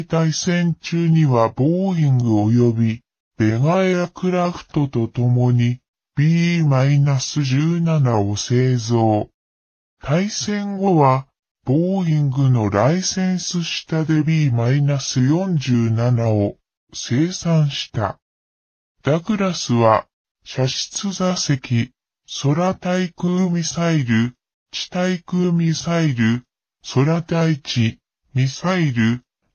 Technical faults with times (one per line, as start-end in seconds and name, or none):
0.00-29.54 wrong sample rate